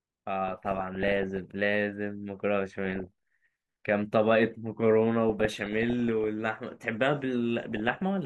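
Weak DAB reception lets bit errors, at a rate somewhere under one percent, slip past error correction into the MP2 audio, so single sub-bands get short blips of noise. This DAB burbling sounds over the speech at 0.48–1.39 s, 2.85–3.07 s, 5.29–6.28 s and 7.64–8.02 s.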